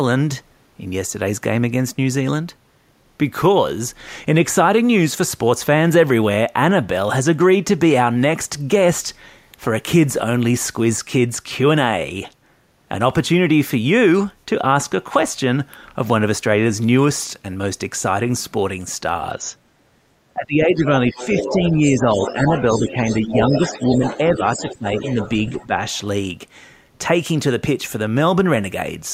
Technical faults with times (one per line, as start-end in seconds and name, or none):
20.34-25.18 speech suppressed in double talk
20.94-25.98 other side's voice leaking through
25.50-25.79 speech suppressed in double talk